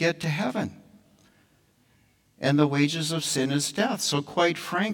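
From start to finish the speech carries channel delay (comb filtering): one channel trails the other by roughly 20 ms, so the mono sum cancels at regularly spaced frequencies from near 30 Hz upward. It sounds rough and slightly doubled, yet the notches stay fixed, unlike sweeping flanging, with no separate echo.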